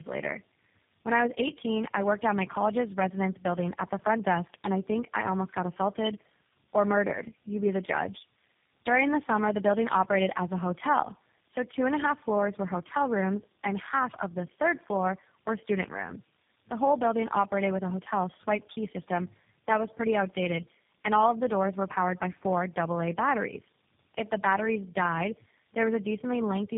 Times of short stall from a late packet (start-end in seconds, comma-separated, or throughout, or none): none